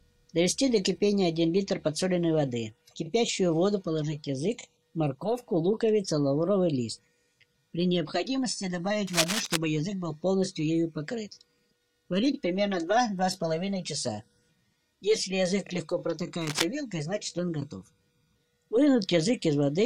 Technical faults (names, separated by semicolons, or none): cable scratch noise